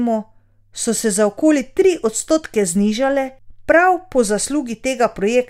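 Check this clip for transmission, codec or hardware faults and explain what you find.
Nothing stood out on listening to this speech recording that would point to a problem anywhere in the chain from capture to playback.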